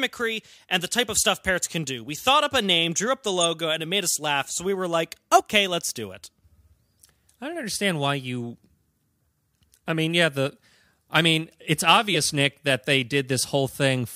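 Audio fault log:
3.40–3.45 s, corrupt frame decoded: Right after "name drew up the" and before "and it made us", a brief chirpy burst appears. Damaged bits across a few compressed frames were decoded anyway, so misread gains and codes threw energy into the wrong frequencies, peaking around -15 dBFS.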